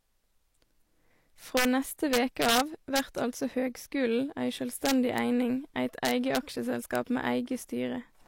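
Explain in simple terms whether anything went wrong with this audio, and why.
Integer overflow breaks the loudest moments of this speech into harsh cracks at 1.57–1.65 s, 2.13–2.60 s, 2.96–2.99 s (just before "altså høgskulen ei"), 4.86–5.18 s (right before "eining eit"), 6.05–6.37 s, and at 6.95 s. The peaks barely exceeded the largest number the system could store, and instead of being capped they wrapped around to the opposite extreme. Ordinary clipping would flatten peaks into a fuzzy buzz. These wrapped peaks snap violently instead.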